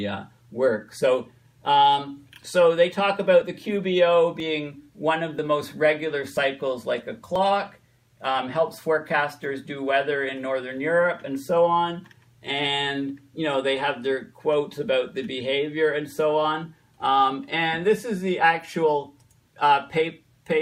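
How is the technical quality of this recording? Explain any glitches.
The technical quality is marred by a repeated glitch: overlap between stream segments. Small skips occur at 1.45, 2.43, 4.40, 5.39, 6.37 and 7.36 s. They fall roughly once per second, matching 1 s stream segments. At each boundary, two segments claimed the same stretch of time. The player discarded the overlap, though that sound was never duplicated. About 5 ms of audio vanishes each time. The waveform jumps, producing a brief tick or micro-skip.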